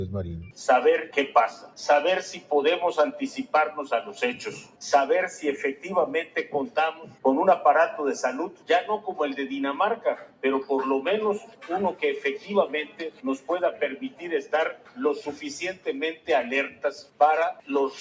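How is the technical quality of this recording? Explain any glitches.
The recording is compromised by a speech noise suppressor that was left running on non-speech sound. The call microphone path band-limits everything, with nothing above 8 kHz, but the suppressor is the real problem.

Noise suppressor applied to music or sounds: Throughout, the suppressor misreads sustained, steady content as noise and pulls it down, with gain swinging by roughly 10 dB. Attacks pass while held sound and tails sag, so the audio pumps and thins. A waveform shows an uneven, breathing envelope.

Sound cut by the noise suppressor: Deeper cuts occur at 1.07–4.81 s, 5.74–7.25 s, 8.49–10.44 s and 11.39–17.69 s, dropping about 10–11 dB. Within each span, portions totalling roughly a second, under a second, under a second and about two seconds sink. On a spectrogram, decays end abruptly in dark gaps.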